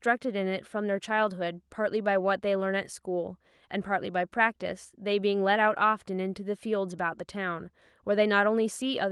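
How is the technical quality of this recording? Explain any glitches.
The technical quality is sound, and there are no glitches to explain in this speech heard over a call connection.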